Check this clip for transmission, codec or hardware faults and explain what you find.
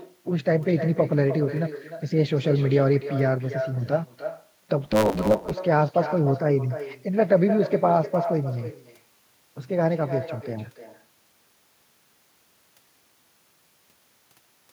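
Two faults are present: an uncancelled echo across the whole recording, and a short stretch of block truncation.

Echo with no canceller runs from start to finish. Every phrase is followed by a fainter copy, about 10 dB down, roughly a third of a second later. That copy sounds thinner than the direct speech. The far end is playing the call through a loudspeaker. Its microphone picks it up again. Nothing subtracts it, so the speech returns after the network round trip.

A block size mismatch, truncated, occurs from 4.84 to 5.54 s. One stage hands over longer blocks than the next stage accepts. The tail of each block is dropped. Each cut repeats at 109 Hz, which produces a steady buzz over the speech. Because material is discarded, the speech runs 1.16 times faster. The pattern fits 512-sample blocks being written into a smaller read size.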